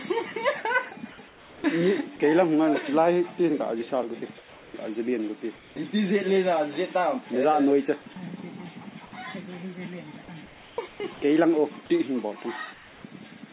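Discontinuous transmission likely muted the sender during quiet gaps, so comfort noise in place of the background appears at 1.28–1.64, 4.38–4.74, 5.56–5.76, 10.46–10.78, 10.88–11.00, 11.14–11.22 and 12.74–13.04 s. Each time, the real background gives way to a steady, featureless hiss about 1 to 5 dB quieter, until the sound resumes.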